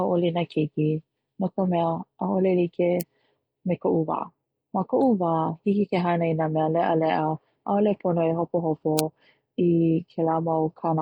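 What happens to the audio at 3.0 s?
At 3.01 s an uninitialised buffer plays: a roughly 0.67 ms block of leftover memory, which fits a 32-sample buffer, is output as samples, producing a brief, loud crack.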